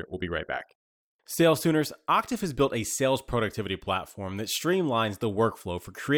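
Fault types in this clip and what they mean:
Nothing stood out on a careful listen to this speech recording, so there is no fault to list here.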